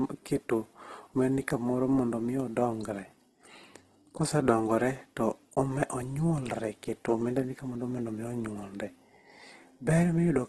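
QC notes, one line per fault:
throughout, Opus compression: speech sounds grainy and rough, with nothing above 12.1 kHz, likely Opus CELT filling bit-starved bands with noise, which fits about 12 kbps.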